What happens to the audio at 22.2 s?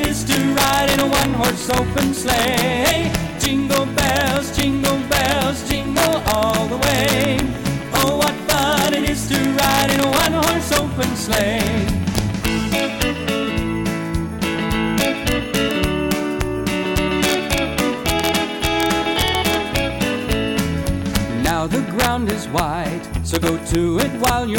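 At 22.2 s the audio carries the integer overflow that runs through the whole clip. With the signal driven about 4 dB past full scale, the loudest peaks, a small fraction of samples, exceed the integer limit and wrap to the opposite extreme. Each one lands as a harsh, sharp crack, far more violent than ordinary clipping.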